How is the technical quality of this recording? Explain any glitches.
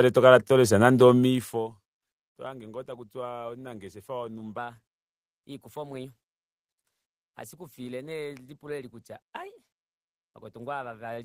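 One glitch stands out. Section at the wrong speed, 4.58 s to the end: the speech runs 1.12 times fast, likely from a clock mismatch, sounding hurried and about two semitones higher.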